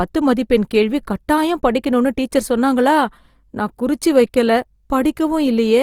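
Throughout, the speech carries plainly audible Opus compression, likely CELT mode near 24 kbps: noise-filled bands make it rough and grainy, though bandwidth reaches 20.2 kHz.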